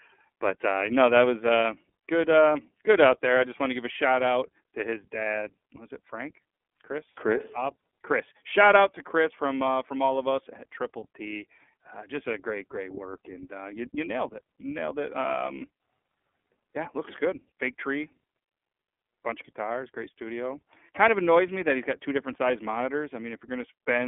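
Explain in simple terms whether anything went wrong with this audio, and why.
Yes, something went wrong. The speech has passed through the iLBC codec, a phone-call codec used for internet calls. It is heard for the whole clip. Nothing above about 3.6 kHz remains, so the voice sounds thin and muffled, like an old phone line. The codec squeezes the sound into 30 ms chunks, each handled on its own. That makes the speech plainly rough and slightly synthetic throughout.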